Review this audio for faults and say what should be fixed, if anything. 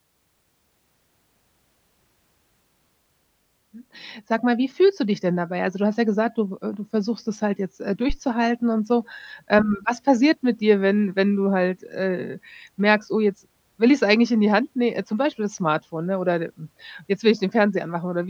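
There's a phantom power thump at 8.10 to 8.16 s, right after "es halt äh jetzt" and before "und so": a deep low thud peaking around -14 dBFS that dies away within about 14 ms. That's the supply step on a live input kicking through the coupling capacitors. Next time, mute the channel or pull the fader down before switching phantom on or off.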